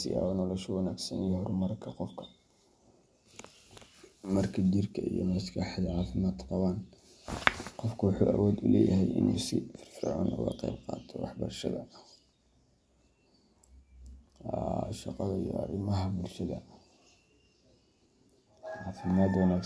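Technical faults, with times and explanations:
No technical faults detected.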